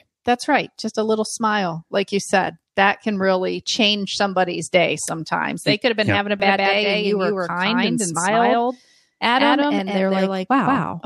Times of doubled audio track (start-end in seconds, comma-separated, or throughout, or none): 6.40-11.06